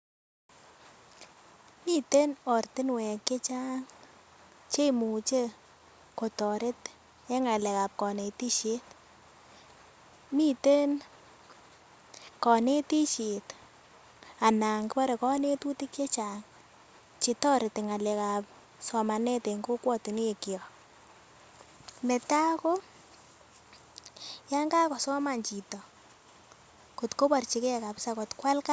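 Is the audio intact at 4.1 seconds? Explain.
Yes, the audio at 4.1 seconds is intact, with no fault audible at that moment.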